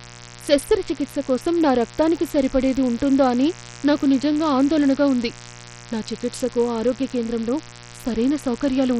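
A raspy mains buzz runs under the speech from start to finish. It is built on 60 Hz, with sharp harmonics reaching into the kilohertz range. Switching spikes from poor shielding or a rectifier likely entered the signal path. It sits roughly 20 dB below the speech.

The whole clip also carries heavy compression damage, most likely from Bluetooth SBC coding. Nothing remains above 18.1 kHz. The upper bands were starved of bits, so treble flickers and drops. Coarse quantisation leaves gritty noise and aliasing, pointing to a low bitrate.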